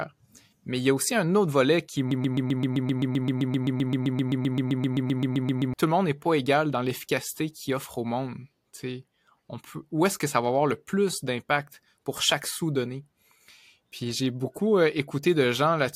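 From 2.11 s to 5.74 s the speech turns into a broken-record loop: a fragment of about 0.13 s repeats exactly, 28 times back to back. The likely cause is a stalled player or stream resending its last buffered piece, so the intervening audio is lost.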